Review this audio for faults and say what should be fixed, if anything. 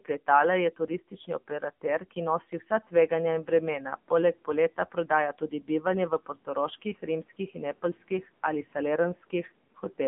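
The call path ran the speech through the AMR narrowband mobile codec at a low mode, which fits roughly 7.95 kbps. The result is a 150 Hz to 3.4 kHz telephone band with nothing above 3.6 kHz, and plainly buzzy, synthetic consonants and vowels. Preventing this means negotiating a wideband codec or a higher AMR mode end to end.

The noise suppressor mistook speech for background and pulled it down by up to about 12 dB in three stretches: 0.77 to 2.17 s (around a third of a second affected in total), 3.43 to 4.11 s (a brief fraction), and 4.45 to 8.11 s (about half a second). Endings and soft sounds come out swallowed. The room noise rises near 2.5 s but stays well under the speech. A gentler suppression setting or a slower-adapting noise estimate would keep it from cutting into speech.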